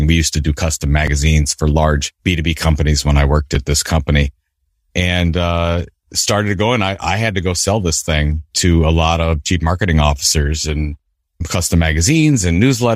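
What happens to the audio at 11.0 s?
At about 10.99 s, just after "chief marketing officers and", the speech skips: a sliver of roughly 20 ms is missing and the two sides are butted together with no gap, giving a tiny jump. The likely cause is audio missing between chunks, lost as a 2.5 s processing block closed and the next opened. A waveform shows an abrupt step discontinuity; a spectrogram shows a thin vertical broadband line.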